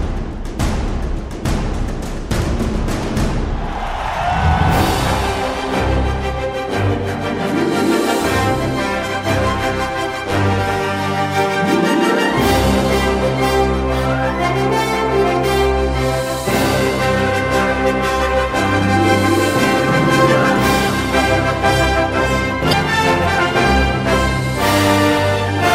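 A brief glitch sounds from 22.69 to 22.73 s, caused by damaged data in a compressed stream that makes the decoder misread frames and lose sync.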